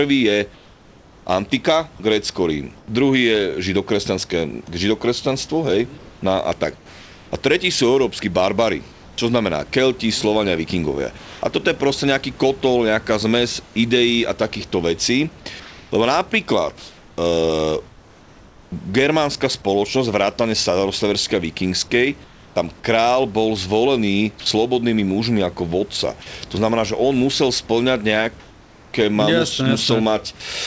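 Speech that has passed through a call path whose spectrum stops at 8 kHz, consistent with G.722 at around 64 kbps, shows comfort noise in place of the background during pauses at 0.54–2.88 s, 5.98–11.42 s (ending before "toto je proste"), 13.64–18.72 s (ending before "germánska spoločnosť vrátane") and 28.40–28.94 s. The likely cause is discontinuous transmission. The sender stops coding while nothing is spoken, and the receiver synthesises a stand-in noise. About 820 ms, 1.3 s, 1.68 s and 540 ms of real room tone are swapped out in those spans. In the last gap, where the background sits about 27 dB below the loud passages, the fill is about 2 dB quieter. On a spectrogram the textured room noise becomes a smooth, uniform wash with hard vertical edges at each swap. On the waveform the noise floor turns flat and even. There is also sound dropped by the voice detector at 24.40–24.46 s, right after "tam král bol zvolený": the detector likely judged the tail of the sound as background, so 60 ms of it is replaced by that same featureless noise. 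A spectrogram shows the speech energy cut off abruptly into a flat noise band, and the waveform shows the envelope chopped short instead of decaying naturally.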